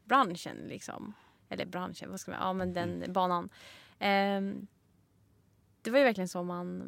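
A short recording of speech, with no technical fault to be heard in it. There is nothing here that calls for a time or a cause.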